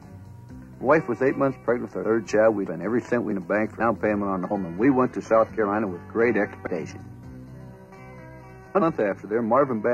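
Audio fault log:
4.17–9.93 s, adaptive stream at a lower bitrate: quality drops suddenly, without a gap, as treble turns thin and synthetic with stronger codec artefacts, pointing to a switch to a low-rate HE-AAC stream. A spectrogram shows nothing above 14.9 kHz from that sharp edge.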